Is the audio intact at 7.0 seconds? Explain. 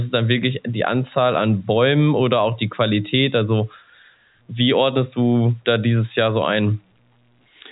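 Yes, the speech at 7.0 seconds is intact, carried through G.711 telephone coding without any audible fault at that moment.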